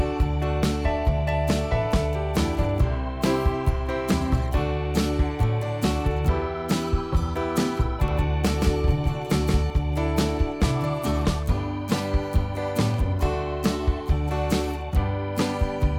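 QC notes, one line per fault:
8.08–9.70 s, doubled audio track: a second full-band copy trails about a fifth of a second behind, a few dB quieter, likely from a misaligned edit or duplicate capture path.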